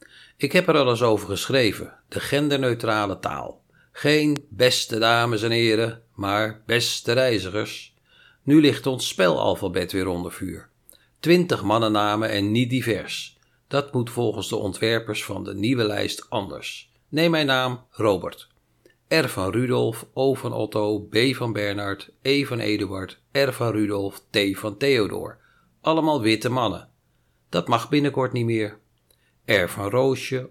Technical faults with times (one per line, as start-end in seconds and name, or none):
4.36-4.38 loud pop